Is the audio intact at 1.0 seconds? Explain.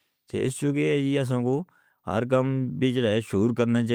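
Yes, at 1.0 seconds the speech plays through cleanly, with no dropout, click, distortion or other fault at that moment.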